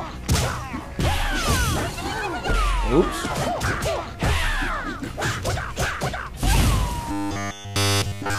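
From 7.12 s to the end at 8.38 s, the sound turns into a rigid, metallic buzz. This is robotic sound from repeated short buffers. The buzz sits at a fixed 100 Hz, which means a chunk about 10 ms long is being played over and over. All of this stretch is made of those repeats. The likely cause is new audio arriving too seldom, so the player loops the last fragment and skips the real material.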